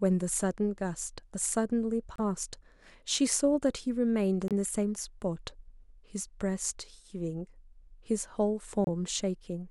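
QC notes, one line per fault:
2.16–2.20 s, corrupt frame decoded: a brief chirp-like blip peaking around -20 dBFS. Its length points to a single damaged compressed frame that the decoder played anyway, with flipped bits steering energy to the wrong frequencies.
4.48–4.52 s, corrupt frame decoded: the same kind of short squeak at a similar level, again about one frame long.
8.84–8.88 s, corrupt frame decoded: a louder burst near -15 dBFS that fits two consecutive damaged frames.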